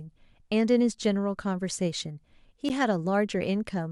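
At 2.69 s the speech has a block of digital silence: a block of zeros about 11.6 ms long was played, which fits a 512-sample buffer left empty. The waveform drops straight to silence and jumps back with no fade, so each edge is a hard discontinuity. Because the gap is so short, it is heard as a tick or dip rather than an audible hole.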